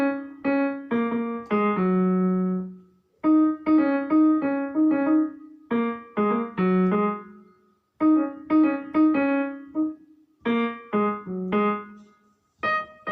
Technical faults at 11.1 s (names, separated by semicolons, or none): none